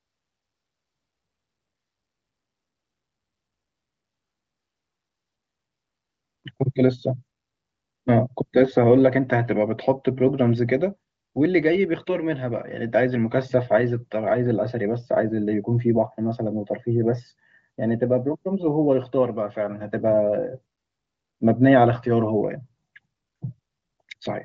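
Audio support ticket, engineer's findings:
Nothing stood out on listening to this speech clip, which comes across as wideband HD Voice audio with nothing above about 7.5 kHz.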